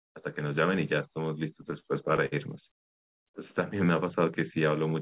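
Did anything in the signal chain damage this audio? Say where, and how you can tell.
Yes: repeated stalls (stutter) at the network and jitter buffer, 1.62 to 2.34 s. Six short gaps, longest 59 ms, were filled by repeating the last sound, showing as stretched, smeared frames on a spectrogram.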